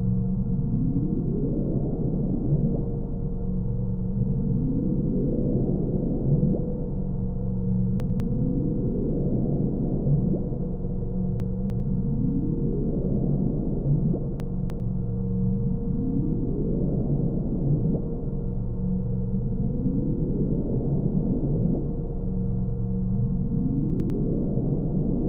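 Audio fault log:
8.0–8.2 s, 11.4–11.8 s, 14.4–14.8 s, 23.9–24.1 s: chunks out of order. 100 ms chunks play one or three chunks late, giving jumbled moments with three hard joins each.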